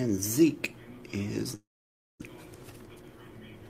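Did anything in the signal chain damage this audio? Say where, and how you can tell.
Yes. A long network dropout runs from 1.55 to 2.28 s. The last sound is stretched into a fading buzz or hiss, then about 550 ms of near-silence, and the audio resumes with roughly 600 ms missing. That is likely packet loss on the network path, concealed by the receiver.

A jitter buffer speed-up follows at 2.81 to 3.03 s. The audio plays at about 117% speed with unchanged pitch, so it sounds hurried. The receiver trimmed short pitch-period pieces, around 50 ms in total, to drain excess buffered delay.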